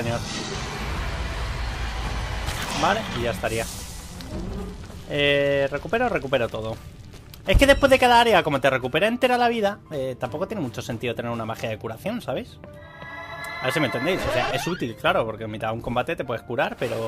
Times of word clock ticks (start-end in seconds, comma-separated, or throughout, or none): none